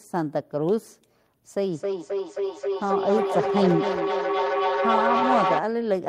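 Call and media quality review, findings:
Feedback echo between two devices, 1.72–5.64 s. Speech returns about every 0.3 s, repeats thinning and ringing, peaking at about -2 dB against the direct speech, piling up rather than decaying. Probable component: second device in the room, its playback re-captured outside the other's echo canceller. Unlike single-device echo or room reverb, the repeats recur at a fixed interval and build up.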